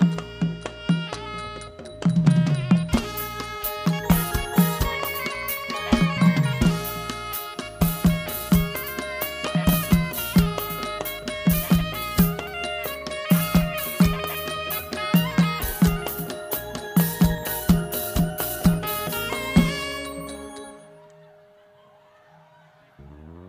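No technical faults can be heard in the audio.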